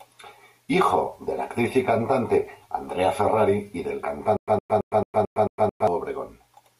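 The playback most likely stalled at 4.37 s, and each retry replayed the last fragment it held before running dry again. The result is a stutter with silent gaps, from 4.37 to 5.88 s, just after "y del". A burst of about 111 ms of speech repeats seven times, each followed by roughly 110 ms of dead digital silence, giving an even cycle of about 221 ms. Whatever should have been heard during that stretch is missing entirely.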